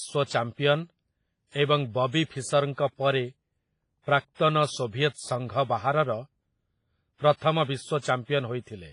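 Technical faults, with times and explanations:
Throughout, WMA compression: a low-bitrate transform codec, likely WMA at around 24 kbps, has quantised the speech heavily, smearing noise over long blocks and discarding weak detail, so it rings and sounds washy, with breathing hiss and nothing above about 10.1 kHz.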